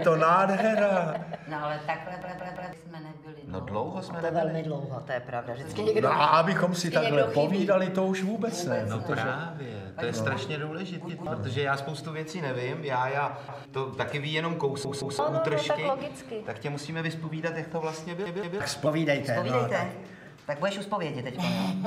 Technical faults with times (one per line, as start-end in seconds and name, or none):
2.22-2.73 repeated buffer
11.09-11.26 repeated buffer
13.48-13.65 repeated buffer
14.85-15.19 repeated buffer
18.26-18.60 repeated buffer
18.86-21.87 section at the wrong speed